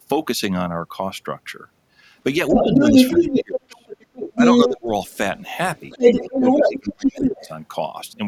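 From 2.5 to 3.88 s the talker's speech is suppressed in double talk. It drops by up to about 25 dB. The other side's voice is also leaking through from 2.5 to 4.7 s, a little louder than the talker. The likely cause is residual echo that the echo canceller missed. It then likely mistook the overlap for echo and turned the talker down. The same suppression returns from 4.35 to 4.91 s, dipping by about 20 dB. From 5.06 to 7.48 s the other side's voice leaks through again at a similar level. The likely cause is the same incomplete echo cancellation. Against it, the talker is suppressed from 6.1 to 7.5 s by up to about 20 dB, likely from the same double-talk confusion.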